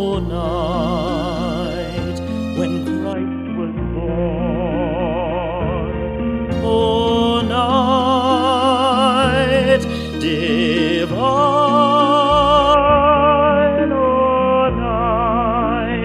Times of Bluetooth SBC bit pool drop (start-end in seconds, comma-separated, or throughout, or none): 3.13-6.51, 12.74-16.05